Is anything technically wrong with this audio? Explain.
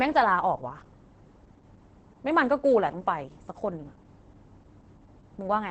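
Yes. Throughout the speech, it shows heavy Opus voice compression. The SILK linear-prediction coder models each 20 ms frame with a compact filter and a coarsely quantised excitation, which fits a rate around 10 kbps, and the band is cut to wideband, so nothing remains above about 8.5 kHz. The result is muffled, hoarse and faintly robotic. A simple low-pass filter would dull the top without this rough, buzzy texture in the voice itself.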